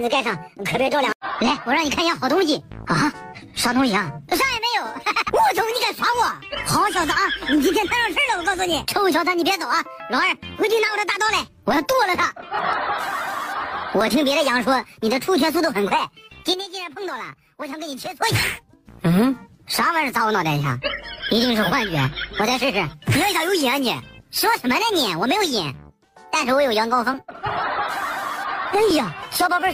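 At 16.54 s the audio and its background noise drop together by about 11 dB, recovering at 18.22 s: a sudden gain jump, likely an unramped digital gain change.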